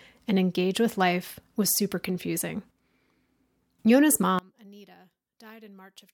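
A speech clip in which, from 4.39 s to the end, the voice collapses to a faint remnant, about 27 dB quieter. This is likely one channel inverted: with one side's polarity reversed, the centred voice cancels when the channels are summed to mono, leaving only their small differences. On a waveform the envelope drops abruptly to a thin sliver at 4.39 s; a spectrogram shows energy suddenly fading across the band.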